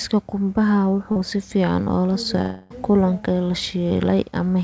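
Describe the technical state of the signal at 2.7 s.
At 2.7 s the audio sits in a likely long network dropout (2.41–2.72 s): the last sound smears into a fading buzz, a decaying blurred band on a spectrogram, before speech resumes.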